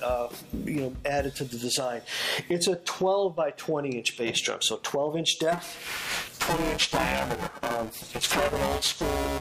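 From 5.52 s to the end, buffer tearing sets in. The write and read positions in the playback ring buffer have drifted until they cross inside every period. About half of each buffer then carries audio from one lap earlier, roughly 10 ms stale. A hard join sits on each side of that stale section. The result is a robotic buzz at 345 Hz, which fits a 128-sample buffer. It persists wherever there is signal.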